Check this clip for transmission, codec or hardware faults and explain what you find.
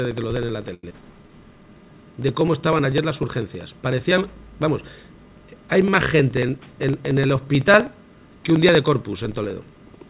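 Five faults are present, layered over a call path whose band stops at 4 kHz with the grainy floor typical of G.711 mu-law.

Periodic USB or driver dropouts run from 0.05 s to the end, every 0.063 s. Something on the host is blocking the USB transfer or the audio driver at that fixed interval, and each time a small slice of audio is skipped outright rather than padded with silence. The result is a steady train of ticks, roughly sixteen per second, audible whenever there is signal.

A short stall from a late packet occurs at 0.74 to 0.84 s. A packet arrived late, the jitter buffer ran dry, and the receiver held the last sound for 91 ms until the data turned up, then resumed where it had stopped. Nothing is lost, but the sound at that point hangs unnaturally long, with a faint buzzy or flattened quality, and playback now sits 91 ms later than before.

A short concealed packet loss follows at 0.89 to 0.91 s. 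About 50 ms of audio never reached the decoder in time. The receiver extrapolated only 11 ms from the preceding sound and then blended back into real audio, so most of the gap is simply gone. It is heard as a brief smear or wobble with a small jump forward, and it takes back about 40 ms of the delay the stall had added.

A jitter buffer slow-down runs from 1.11 to 1.29 s. With the buffer low, the receiver rebuilt its reserve by repeating single pitch periods and short stretches of pause, inserting 42 ms in total. Playback drops to 82% speed while the pitch stays the same, so the sound drags and sustained parts stretch out.

A jitter buffer speed-up runs from 6.25 to 7.10 s. Here the buffer held more audio than its target, and the receiver cut short pieces of one or a few pitch periods many times in a row, removing roughly 100 ms. Playback runs at 110% with unchanged pitch, so this stretch sounds hurried and its timing is compressed compared with the surrounding audio.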